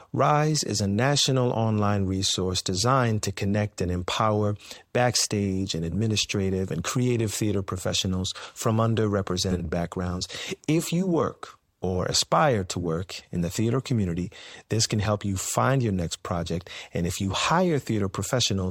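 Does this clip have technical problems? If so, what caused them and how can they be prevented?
Yes. Around 9.51 to 9.61 s, frames out of order: two adjacent runs of about 40 ms were decoded swapped, giving a garbled flutter. Preventing it means reordering packets by sequence number in a jitter buffer before decoding.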